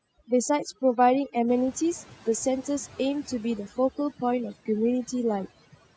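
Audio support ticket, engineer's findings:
Overdone noise removal, throughout. Background pulled down, with twinkling specks where noise bands flicker on and off. Quiet speech detail drops out with them. Suppressor set too aggressive. Gates single frequency bands whenever they sit close to its noise estimate, including weak speech components. Call mic high-pass and roll-off above 8 kHz are as expected.

Noise suppressor catching up, 1.48 s to 3.48 s. Room noise jumps by roughly 15 dB around 1.5 s. It comes through underattenuated, then sinks over about 2 s. Noise estimate lags the step change. Adaptation takes about 2000 ms, then applies about 6 dB more cut. Afterwards the noise sits about 26 dB under the speech.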